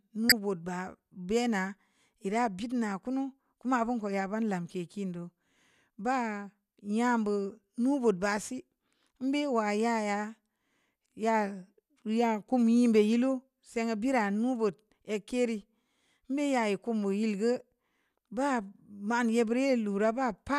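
Right at the start of the speech, from 0.29 to 0.32 s, there's a corrupt frame decoded: a couple of damaged compressed frames got played anyway, so misread data throws energy into the wrong frequencies. You hear a short chirp, squeak, blip or burst of noise, peaking at about -10 dBFS.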